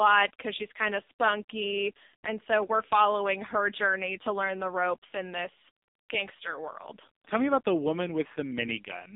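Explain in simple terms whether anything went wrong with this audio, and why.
AMR narrowband mobile codec damage runs through the whole clip, from start to finish, about 9 seconds. This is the squeezing an older mobile phone network applies to speech. It keeps only a narrow slice of sound, roughly 200 Hz to 3.7 kHz, so everything sounds muffled and thin. At the very low data rate used here, the codec rebuilds the voice from a rough model and a few pulses, which makes it sound heavily buzzy and artificial.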